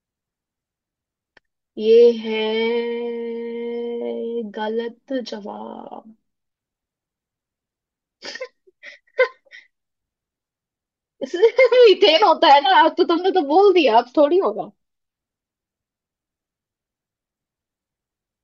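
No technical faults can be heard anywhere here.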